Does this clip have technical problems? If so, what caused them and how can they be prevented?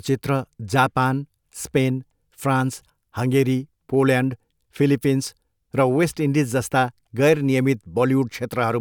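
No, nothing in this speech recording points to a technical fault, so there is no cause to trace and nothing to prevent.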